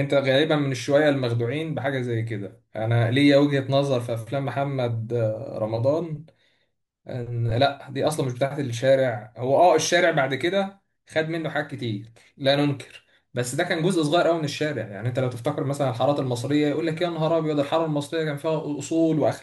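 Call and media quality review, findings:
No faults found in the speech recording. Nothing to escalate for this clip.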